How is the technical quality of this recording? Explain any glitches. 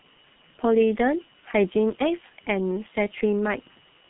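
The technical quality is poor throughout, because the whole recording has been through the G.723.1 codec with heavy damage. Nothing reaches above 3.9 kHz, so the speech is muffled. The coder models the voice in coarse 30 ms frames at a rate that fits roughly 6 kbit/s, which leaves a hoarse, rough texture and smeared consonants. A plain low-pass filter would only dull the sound, and wouldn't add that grainy roughness.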